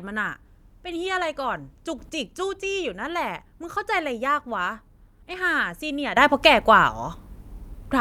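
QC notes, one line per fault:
1.99–2.10 s, sudden gain jump. The speech and background noise leap up together by about 9 dB, then drop back after 0.11 s. The likely cause is a gain step applied without a ramp, so the level changes abruptly.
6.17 s to end, sudden gain jump. Speech and noise rise together by about 12 dB and stay raised to the end. An unramped gain change likely made the step instant.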